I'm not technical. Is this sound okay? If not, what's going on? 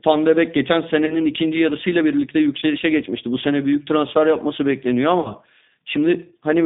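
No. Throughout, the speech sounds thin, slightly rough and robotic, because it passed through the G.729 codec, a low-quality phone-call format that keeps only a narrow band of sound.

At 1.06 to 1.22 s, 2.60 to 2.63 s and 5.20 to 5.32 s, the speech briefly stretches into a buzzy or noisy sound that fades. This is VoIP packet loss concealed by the speech codec: pieces of the call went missing, and the phone guessed to fill the gaps.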